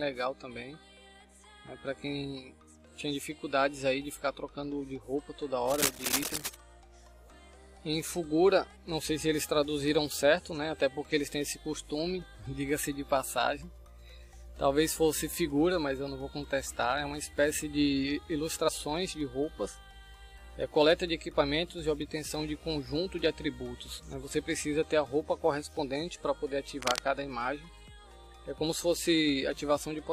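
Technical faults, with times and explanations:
5.67 to 6.55 s and 26.82 to 26.99 s, cable scratch noise: a dense, uneven rustling and crackling sits over the sound, roughly as loud as the sound itself, lasting nearly a second the first time and a brief fraction of a second the second time. This is likely a worn cable, connector or control being moved, so its contact resistance flickers rapidly and injects bursts of noise into the signal.
18.67 to 18.69 s, compressed frames skipped: a short smeared blip where the audio lurches forward, missing about 50 ms of material. That jump fits two frames of roughly 23 ms each that were never played, either absent from the file or rejected by the decoder as damaged. Because neighbouring compressed frames overlap, the join comes out as a soft blur, not a sharp click.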